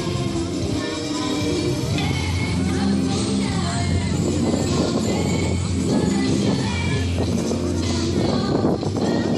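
Nothing is technically wrong with this audio.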